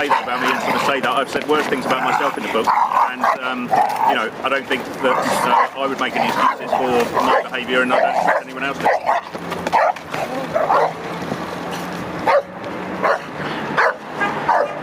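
Gain pumping runs throughout, with the level swinging by about 15 dB, likely from a fast limiter clamping excessive input gain on each loud sound, squashing the dynamics.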